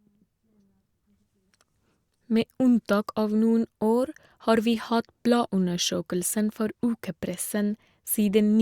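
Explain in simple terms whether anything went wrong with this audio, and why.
Nothing went wrong here: the recording of speech holds steady the whole way, with nothing that sounds like a glitch or a technical problem.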